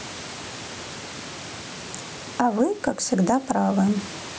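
Gain pumping runs through the whole speech recording: the level ducks by around 10 dB whenever speech gets loud. The likely cause is input gain set far too high, with a fast limiter clamping every peak, leaving the level squashed. The room noise sits about 31 dB below the speech, and the call microphone processing leaves nothing above 8 kHz.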